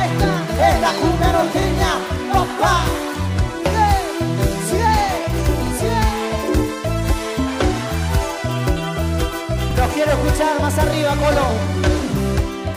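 Short stutters occur at 1.62, 5.67 and 9.71 s, about 4.04 s apart, the signature of overlapping chunks. The audio was handled in 4 s blocks, each starting 44 ms before the previous one ended, so that 44 ms plays twice at every join. Unlike a dropout or lost packet, nothing is missing. The sound repeats a fragment instead of going silent, and the fixed spacing sets it apart from random glitches.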